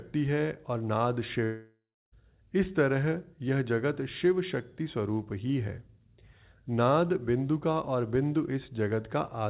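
At 1.44 s the speech cuts out and stays broken until about 2.14 s, roughly 0.7 s in all, and that sounds like a long network dropout, likely a run of packets that never arrived. The receiver stretches the last bit of sound into a fading buzz, which tails off into near-silence for about 0.3 s before the speech picks up again further along, with that stretch simply gone. Over the whole clip everything sits below 4 kHz, as you'd expect from a G.711 call path.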